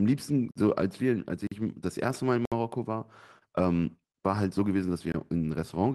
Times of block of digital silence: 0.51-0.55, 1.47-1.51, 2.45-2.52, 5.12-5.14

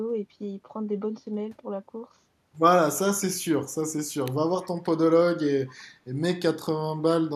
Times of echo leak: 4.62-4.69

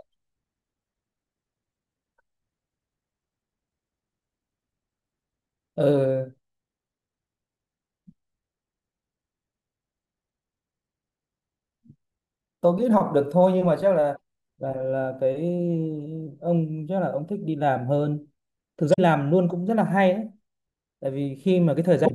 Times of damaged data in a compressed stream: 14.12-14.20, 18.90-18.99, 22.02-22.11

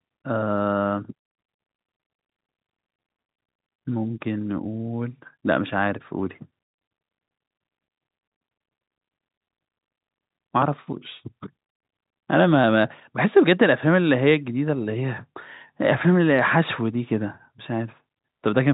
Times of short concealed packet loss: none

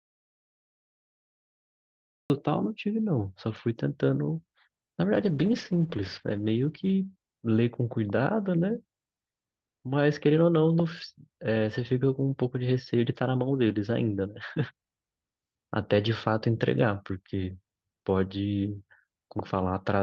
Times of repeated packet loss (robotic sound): none

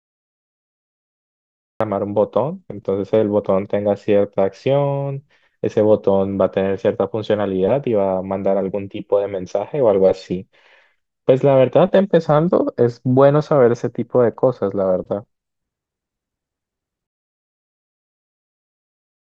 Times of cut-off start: 0.00-1.80

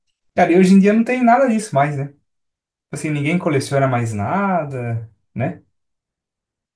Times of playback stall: none

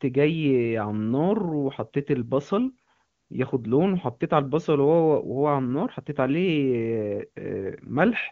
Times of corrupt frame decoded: none

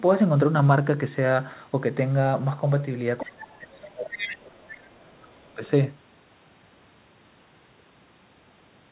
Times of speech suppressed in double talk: 3.23-5.62

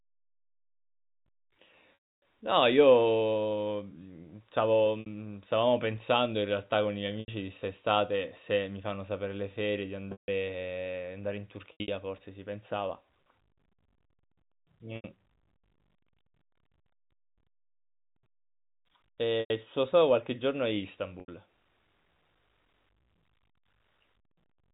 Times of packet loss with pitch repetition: 1.94-2.19, 5.00-5.06, 7.20-7.28, 10.12-10.28, 11.72-11.88, 14.96-15.04, 19.40-19.50, 21.20-21.28

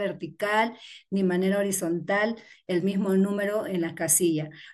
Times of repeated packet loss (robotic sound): none

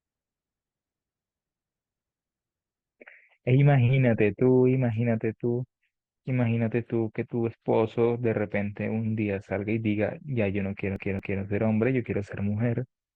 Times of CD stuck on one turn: 10.96-11.42

